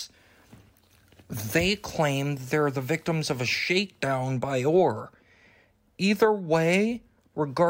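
From 1.61 s to 3.81 s the audio drops to low bit depth with dither, a resolution that fits about 9 bits. Dither added before rounding turns the quantisation error into a constant, even hiss, roughly 35 dB below the signal, with no gritty distortion. On a spectrogram this shows as a flat grey wash across all frequencies filling that span. On the waveform it appears as a fuzzy noise floor that stays put through the quiet moments.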